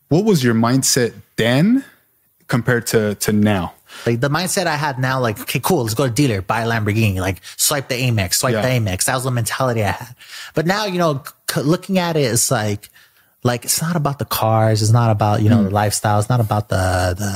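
Gain pumping runs throughout the speech. The gain swings about 10 dB, pulled down under loud syllables, likely from excess gain into a fast limiter. The waveform looks flattened.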